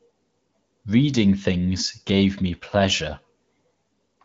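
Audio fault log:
Nothing stood out on listening to this speech clip.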